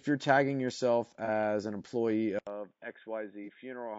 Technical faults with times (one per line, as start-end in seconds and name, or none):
0.00-3.98 low-delay AAC compression
1.25-1.29 AAC frame loss with concealment
2.39-3.98 input switched to a poorer device
3.44-3.48 AAC frame loss with concealment